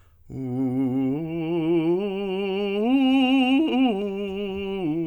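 No faults can be heard anywhere in this music.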